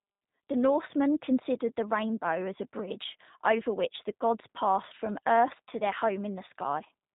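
Speech throughout, carried through the G.729 codec for the full length of the clip, with plainly audible coding damage. Nothing above about 3.8 kHz survives, so the top end is cut away and sibilants lose their edge. The codec resynthesises each 10 ms frame from a vocal tract filter, a pitch predictor and a sparse set of pulses rather than the original waveform. This leaves the speech intelligible but rough and synthetic, a texture that fits the 8 kbit/s G.729A variant.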